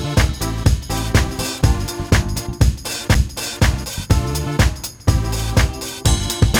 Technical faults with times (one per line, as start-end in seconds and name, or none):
3.14 CD skip